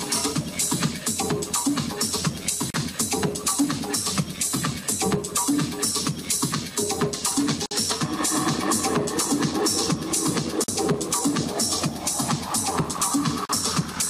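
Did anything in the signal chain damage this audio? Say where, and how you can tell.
Yes, at the codec stage: there's a gap at a join of encoded pieces four times, at 2.70–2.74 s, 7.66–7.71 s, 10.64–10.68 s and 13.45–13.49 s, lasting 39, 52, 46 and 39 ms. Each is a short dropout with smeared edges, and the sound resumes right where it stopped. That points to segments encoded separately and butted together untrimmed, so each encoder's start-up delay and last-frame padding stayed in as silence.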